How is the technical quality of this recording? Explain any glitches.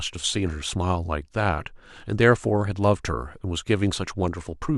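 Nothing in this speech recording stands out as a glitch, so there's nothing here that needs explaining.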